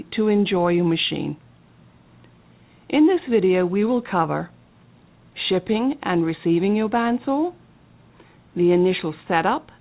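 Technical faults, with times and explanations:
No technical faults can be heard in this audio.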